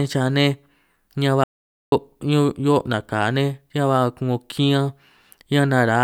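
At 1.44 s there's an audio dropout to silence lasting about 0.48 s, dead silence with no room tone, likely a lost input link.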